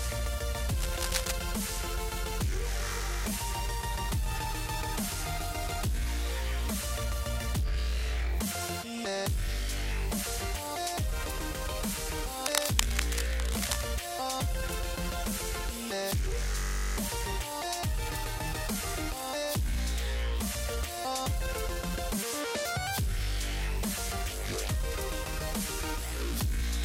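From 0.78 to 1.33 s and again from 12.44 to 13.83 s, cable scratch noise sits just under the sound's level as dense, uneven rustling bursts, likely from a worn, moved cable or connector. These appear as ragged broadband smears on a spectrogram and jagged spikes in the waveform.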